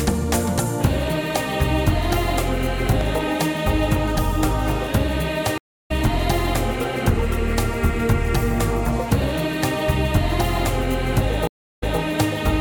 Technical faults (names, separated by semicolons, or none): loud pop; stream reconnect